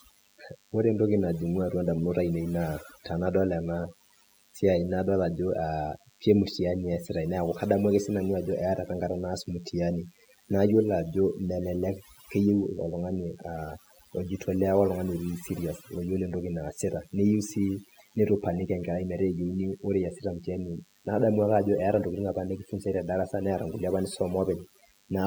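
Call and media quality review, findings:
DECT cordless phone buzz, throughout the clip. Steady, thin 100 Hz buzz with a dense harmonic series, sitting roughly 10 dB below the speech. Probable component: analogue audio front end near a DECT handset or base. Mechanism: the radio's burst every 10 ms gets rectified in the circuit, turning the burst rate into an audible buzz.

Overdone noise removal, throughout the clip. Background drops and breaks up into twinkling specks; quiet speech detail missing. Probable component: noise suppression stage set too aggressive. Mechanism: individual frequency bands near the suppressor's noise estimate get pulled far down or gated off, taking low-level speech energy with them and leaving isolated bands flickering on and off.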